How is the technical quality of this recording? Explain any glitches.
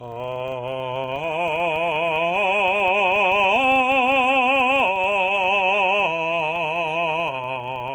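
The technical quality is poor: two faults run through the whole music clip.

The first is likely HE-AAC compression at a very low bitrate, the kind of damage that fits roughly 16 kbps. The codec seems to carry only the lower spectrum in full and to rebuild the treble by copying lower bands upward under a coarse envelope. The result is plainly audible. The treble is not the original, and the brightness that is left sounds synthetic. Cymbal detail comes across gritty and metallic, because the copied harmonics don't line up with the real ones across the crossover.

The second is a filter restarted on every block, also present from start to finish. The filter discards its memory at each block boundary and starts again from silence, so every block opens with a small transient. Those transients recur 25 times per second, which fits blocks about 40 ms long. Together they form a low buzz at 25 Hz that rises and falls with the music's level, louder in dense passages and fainter in quiet ones.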